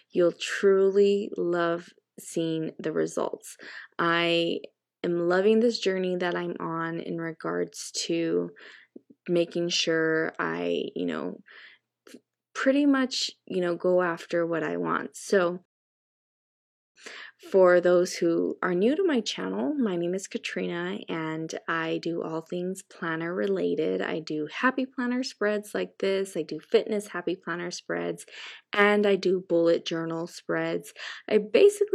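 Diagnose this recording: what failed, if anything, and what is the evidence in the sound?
A rebuffering stall at the playback stage: the player's buffer of downloaded audio ran dry, so output halted until enough new data arrived to continue. In the sound this is a clean drop to silence at 15.65 s lasting until 16.96 s, after which the audio picks up at exactly the point where it stopped. No material is skipped or repeated; the gap simply inserts about 1.3 s of dead air into the timeline.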